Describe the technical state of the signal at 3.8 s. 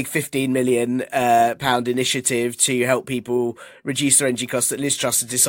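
At 3.8 s the signal is intact, with no audible technical fault at that moment.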